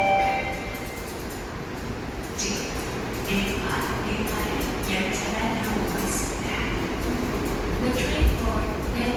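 From start to finish the sound has a swirly, hollow, smeared quality, with transients blurred and softened. This is generation loss, most likely from about five rounds of lossy encoding, pointing to Opus at around 48 kbit/s. Each pass quantised the audio again on a shifted frame grid, so noise piled up. A spectrogram would show smudged onsets, though energy still reaches about 20.3 kHz. The waveform would show rounded, less distinct attack peaks.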